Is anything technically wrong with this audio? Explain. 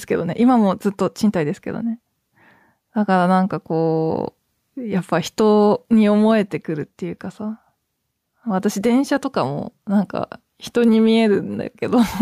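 Yes. Gain pumping runs through the whole clip: the gain ducks by around 5 dB under each loud syllable, leaving the speech squashed and flat. The likely cause is input gain set far too high, with a fast limiter repeatedly pulling the level down.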